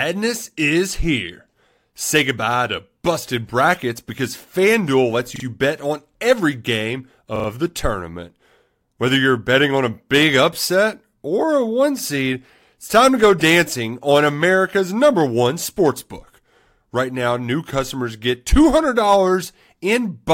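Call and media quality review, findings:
Repeated buffer, playback device: new audio late, last 40 ms block replayed with a hard join at each repeat. Stutter at 5.36–5.44 s (two extra plays) and 7.36–7.48 s (three extra plays). Speech resumes where it left off, with nothing missing.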